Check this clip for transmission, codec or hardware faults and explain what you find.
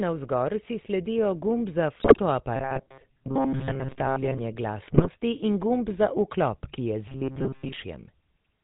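Two faults are present: GSM full-rate coding across the whole clip, and two short bursts of GSM bit errors.

The GSM full-rate codec at 13 kbps is plainly audible throughout. Its pulse-driven vocal-tract model makes the speech buzzy and gravelly, and it passes nothing above 4 kHz. This roughness is steady across the clip, unlike the error bursts.

GSM bit errors occur from 2.00 to 2.20 s, just after "gumb za", and from 4.86 to 5.09 s. Corrupted filter, pitch and gain values distort those frames into brief squawks, pops and gargling. The damage is confined to these two bursts rather than running through the whole clip.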